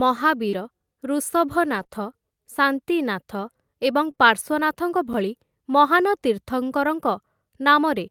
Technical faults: scattered short gaps; gap between chunks; short concealed packet loss

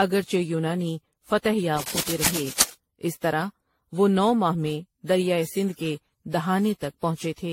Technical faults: generation loss; cable scratch noise

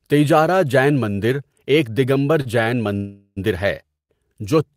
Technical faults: short stall from a late packet; call audio freeze

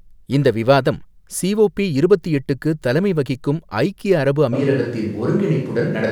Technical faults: switch to a distant microphone

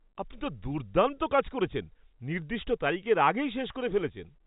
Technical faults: none

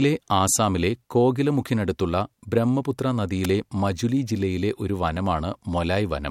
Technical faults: electrical switching spike

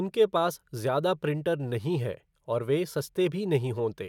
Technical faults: none

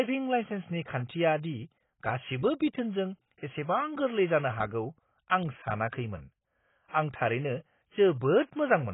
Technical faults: AAC compression

